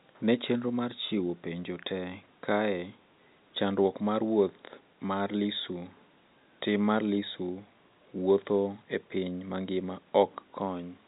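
The speech carries the narrow, band-limited character of an ordinary fixed-line telephone channel, consistent with G.711 A-law coding at 64 kbps, and no technical faults can be heard anywhere in the recording.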